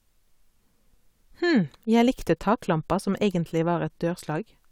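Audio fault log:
No faults are heard in this speech recording. Nothing in it calls for a log entry.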